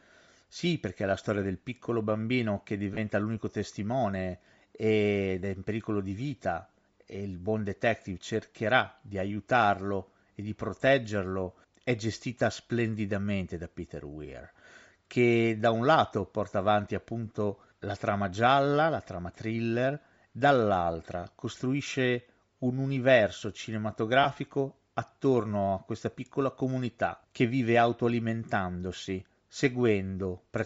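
From start to finish the speech carries a breathy, grainy edge. The upper spectrum sounds thin and hissy rather than clear. This is likely Bluetooth LC3 compression at a low rate, and the damage is plainly audible. The codec keeps too few bits for the high band, so it blanks much of it and fills the gaps with shaped noise. The grain fits a rate near 32 kbps with 10 ms frames.

At 2.94 s comes a brief smeared dropout lasting 30 ms. These are lost LE Audio frames. The gap fits three 10 ms frames going missing. The decoder covered them by repeating the last spectrum with scrambled signs, so the sound turns to noisy mush for an instant. A second, shorter loss hits at 24.23 s and lasts 20 ms, about two frames. It has the same brief hazy blur.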